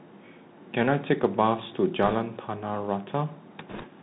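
Bluetooth CVSD headset codec damage runs through the whole speech recording. Each sample is coded as a single up-or-down step whose size adapts, which fits a 64 kbps CVSD stream. Nothing above 4 kHz survives, sibilants turn scratchy, loud bright sounds distort as they outrun the step, and a granular hiss sits underneath.

Bit errors on a Bluetooth voice link appear from 2.03 to 2.15 s and again from 3.69 to 3.86 s, at a rate of around two percent. Because every CVSD bit carries equally small weight and errors fade quickly, there are no sharp clicks. Instead each stretch gets a brief rushing, crackly noise over the speech.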